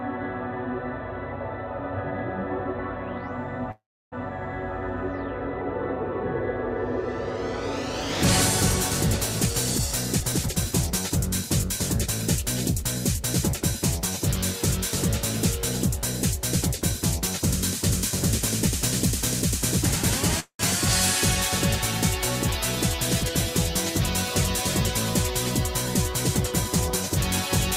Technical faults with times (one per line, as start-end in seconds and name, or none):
3.71-4.14 call audio freeze
9.45-12.44 jitter buffer speed-up
12.83-13.61 jitter buffer speed-up
20.40-20.61 call audio freeze
22.86-23.30 jitter buffer speed-up